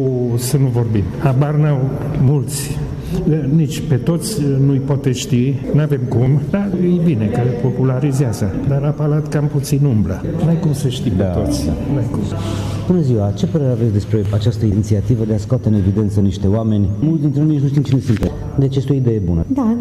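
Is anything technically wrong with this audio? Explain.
Yes. There is an overlap between stream segments, heard at 2.28, 6.26, 10.25, 14.25 and 18.23–18.25 s, recurring every 4 s. Adjacent segments carry time stamps that claim a short stretch twice, so the player discards the supposed duplicate even though that audio was never actually repeated. Between 8 and 20 ms of sound is lost at each junction, and the waveform jumps across the gap, producing a brief click or tiny skip at each of those times.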